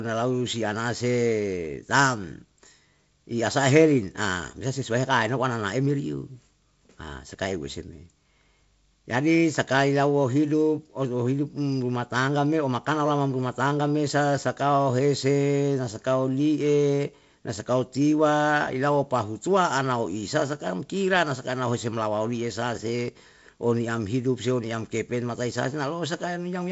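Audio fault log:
Nothing to log here, as the speech comes over G.722 wideband telephone coding at what sounds like 48 kbit/s, with the top end stopping around 7.7 kHz just as that path should.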